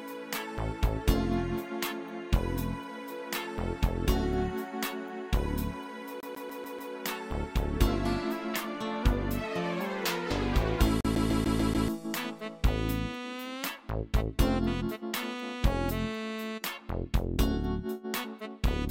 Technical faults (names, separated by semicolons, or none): CD stuck on one turn